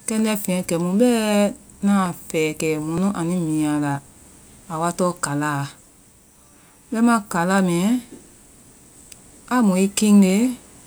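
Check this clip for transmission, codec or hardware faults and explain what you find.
Five sudden skips point to a dropped buffer (overrun), likely from samples not being read before the hardware overwrote them: at 0.59 s, just after "kɛndɛ fɛnyɛ", then 2.06, 2.98, 6.26 and 10.30 s. Each is a jump in the sound, with the speech skipping ahead by a few milliseconds, nearer 15 ms at 2.98 and 10.30 s. There is no gap of silence, which separates this from a dropout.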